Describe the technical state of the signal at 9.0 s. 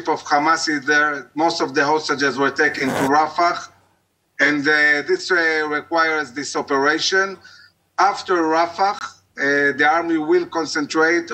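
A brief hole of silence with hard edges cuts into the sound from 8.99 to 9.01 s. This is a gap between stream segments. The time stamps of two consecutive segments, which fits 4-second segments, leave a 21 ms space that the player fills with silence. Nothing is dropped; the audio after the hole simply arrives slightly later.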